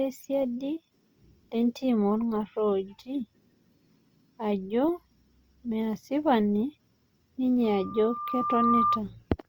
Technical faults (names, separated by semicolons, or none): loudspeaker feedback squeal